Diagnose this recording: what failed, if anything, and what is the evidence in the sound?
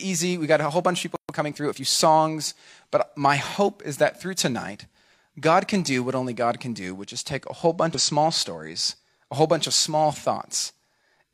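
Playback is where the trouble starts. At 1.16 s the speech cuts out dead for about 130 ms, to 1.29 s, and then picks up again. A clean gap like that in mid-flow is the signature of a playback stall. The player likely ran dry on buffered data or had its output thread held up, so nothing reached the output until it recovered.

Right after that, from 1.29 s to 1.81 s, the player claws back the lost time with time-compressed catch-up. The speech runs about 1.25 times faster than normal but keeps its pitch. That comes from the player snipping out short slices of the backlog and cross-fading the joins, which lets it drain the queue without a pitch shift.

The third problem sits at the codec stage. Between 7.94 s and 8.01 s, a burst of about 60 ms, the speech glitches briefly. That's damaged data in the compressed stream. Data there was corrupted or lost, the decoder misread those frames and lost sync, and it jumped forward to the next valid frame header before carrying on.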